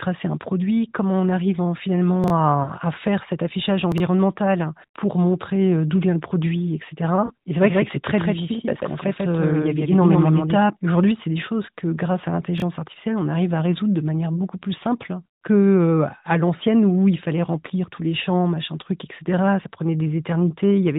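Speech carried over the AMR narrowband mobile codec, heard as band-limited phone audio, has brief jumbled moments at 2.24 to 2.30 s, 3.92 to 4.00 s and 12.58 to 12.62 s. These are chunks out of order: 20 ms blocks play late, after the blocks that should follow them, leaving hard joins. Short dips and warbles, where the sound drags and fades before returning rough, occur at 2.64 to 2.72 s, 7.26 to 7.32 s and 17.96 to 18.00 s. They are lost AMR speech frames, with the decoder filling the gaps by repeating the last good frame at falling gain. The first two fit two lost frames each, and the third fits one. From 7.60 to 10.58 s a flat, roomless repeat trails the sound by roughly 150 ms, at about 5 dB lower, and starts and stops abruptly. This is a doubled audio track, likely from a second, slower capture path mixing in the same audio.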